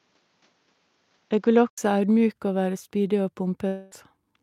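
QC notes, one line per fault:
0.00–1.78 s, input switched to a poorer device: the sound is band-limited with nothing above 7.4 kHz and carries a faint noise floor of its own, then an 80 ms gap at 1.78 s as fuller sound returns at roughly the same level. This likely marks a change of microphone, not an EQ change.
3.67–3.93 s, long network dropout: about 240 ms of audio is likely lost in transit, and the receiver spends almost all of it extending the last sound as a fading buzz, with no silence. Audio resumes later without the missing section, rather than with a brief click.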